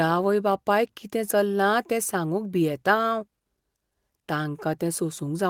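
No technical faults are audible.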